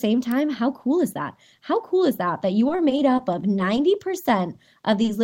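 Speech, and right after "is that that you" there's a run of scattered short gaps from 2.68 to 3.79 s: around seven tiny holes, none much over 10 ms, where packets went missing or arrived late and the receiver just carried the last sound forward to cover them. Together they patch roughly 70 ms, about 7 percent of that stretch, so the speech stays clear but picks up little ticks and smeared hiccups. Then at 5.02 s there's a short stall from a late packet: the jitter buffer ran dry for 20 ms, so the receiver held the last sound until the packet showed up and resumed from the same spot, which pushes the delay out by 20 ms. Nothing is lost there, but the sound hangs a beat too long with a faint buzzy dip. Straight after, at 5.05 s, comes a short concealed packet loss, where 20 ms never made it to the decoder in time. The gap gets filled by extending what came before, pitched if it was voiced or as shaped noise if not, then blended back into the real signal, so you hear a brief wobble or smear right at the tail.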